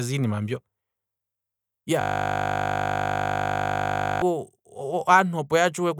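A system hang loop from 2.01 to 4.22 s repeats one 20 ms slice of speech, a steady 50 Hz buzz, because the driver froze while hardware kept replaying its buffer.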